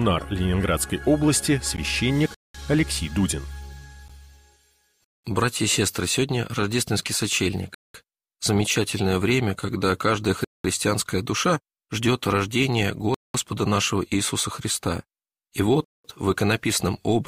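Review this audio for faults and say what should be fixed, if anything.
Gap between chunks: 0.2 s silent holes at 2.34, 5.04, 7.74, 10.44, 13.14 and 15.84 s, one after every 2.5 s of sound. On the waveform they look like flat near-silent runs, and on the spectrogram like blank vertical bands with hard edges. Fix it by joining chunks back to back, trimming any padding and scheduling each chunk to start exactly where the last one ends.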